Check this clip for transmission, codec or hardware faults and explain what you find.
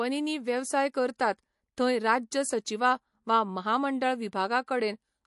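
One codec fault runs through the whole speech clip: likely MP3 compression, which fits a low bitrate around 48 kbps. Nothing remains above 11.3 kHz, and plainly audible watery swirl on s sounds comes from weak spectral lines dropping in and out between frames. A plain low-pass filter would dull the treble without this swirl.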